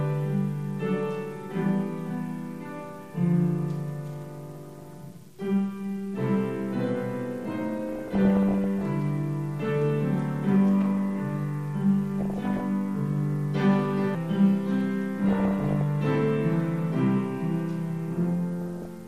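DAB burbling appears in five bursts: 4.55 to 4.94 s, 7.89 to 8.81 s, 12.19 to 12.60 s, 15.29 to 15.81 s and 18.62 to 18.86 s. Weak reception lets bit errors at around 0.5 to 1 percent slip past error correction into the MP2 stream. Corrupted samples put short noise blips into single sub-bands, and corrupted scale factors throw sub-bands to wrong levels for up to a frame, producing bubbling, chirping squelches or watery blips over the sound. The longest burst is at 7.89 s.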